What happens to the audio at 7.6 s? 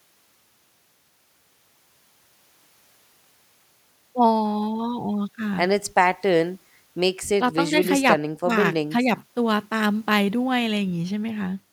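Nothing goes wrong at 7.6 s; the speech carries on intact through that moment, with no dropout, click or distortion.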